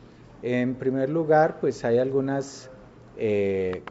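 Nothing stood out on listening to this clip.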